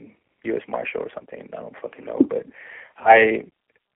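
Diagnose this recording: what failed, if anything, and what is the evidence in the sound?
G.729 codec, throughout, at the codec stage: the speech is confined to a 300 Hz to 3.4 kHz telephone band and sounds rough and synthetic, which fits an 8 kbit/s G.729A coder rebuilding each 10 ms frame from a vocal-tract filter, pitch predictor and sparse pulses.

VoIP packet loss concealed by the speech codec, a network fault, at 1.19 to 1.24 s, just before "I don't fucking know", and 2.97 to 3.16 s, where about 50 ms of losses scatter over 100 ms. The decoder extrapolates its last pitch and filter with fading gain, stretching the speech into a buzzy tone or coloured noise that fades.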